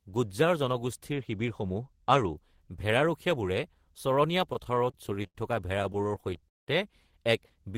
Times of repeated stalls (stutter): 4.53-5.36, 5.79-6.68

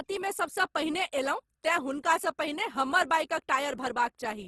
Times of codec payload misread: none

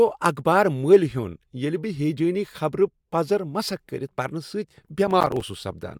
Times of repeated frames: none

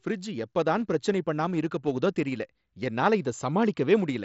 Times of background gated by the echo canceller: none

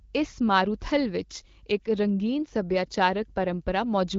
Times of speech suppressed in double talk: none

